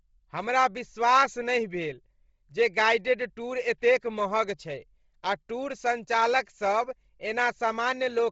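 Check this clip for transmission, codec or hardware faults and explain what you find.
One codec fault is present. It runs through the whole speech clip. The sound is heavily damaged. Nothing reaches above 7.7 kHz, and the upper range has a breathy, grainy texture. This is likely Bluetooth LC3 compression. At a low bitrate it discards upper-spectrum detail and fills the gaps with noise. The damage fits roughly 24 kbps with short 7.5 ms frames.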